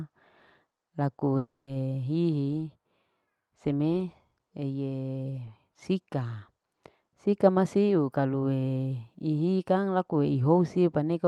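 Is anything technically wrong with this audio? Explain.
Yes. From 1.37 to 1.69 s there is a long network dropout: audio stopped arriving, so the receiver stretched the last sound into a fading buzz before settling into silence, and about 0.3 s of speech is simply gone. That lost stretch, not a clean mute or single-packet glitch, is what likely marks it.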